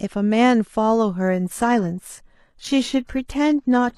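At 1.22 s the speech switches abruptly, with no gap, to an adaptive stream at a lower bitrate and stays there to the end. Codec artefacts grow heavier, consistent with a drop from roughly 96 kbit/s AAC to a low-rate HE-AAC version around 16 kbit/s.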